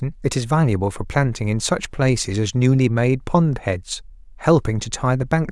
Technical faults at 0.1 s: none

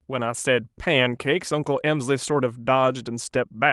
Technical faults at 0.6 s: none

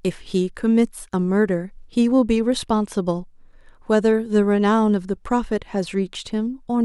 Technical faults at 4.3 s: none

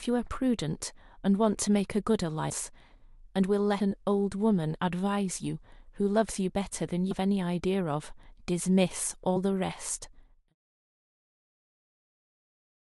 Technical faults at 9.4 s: compressed frames skipped

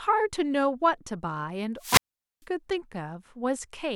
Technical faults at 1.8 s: wireless microphone squelch dropout

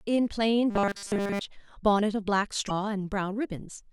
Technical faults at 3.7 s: none

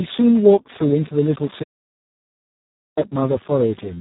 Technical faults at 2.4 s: Speex codec; audio dropout to silence

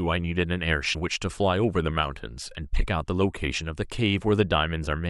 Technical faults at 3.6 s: none

